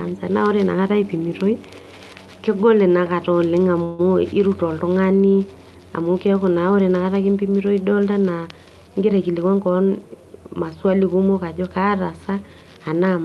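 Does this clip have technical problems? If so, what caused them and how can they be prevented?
Yes. A call audio freeze occurs from 3.83 to 4.01 s, between "kegol inakata oleng" and "irut oltung'ani". For about 150 ms the last sound is stretched into a fading buzz or hiss, likely because delayed packets left the jitter buffer empty. Unlike packet loss, nothing is skipped: the audio resumes exactly where it stopped, just later. Prevention: give the jitter buffer more headroom and prioritise call traffic on the network.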